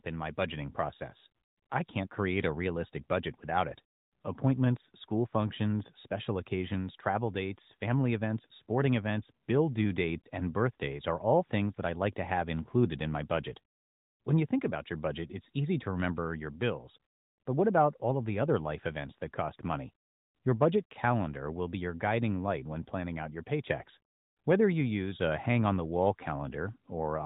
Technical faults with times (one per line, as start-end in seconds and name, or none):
10.20-10.26 lost AMR speech frames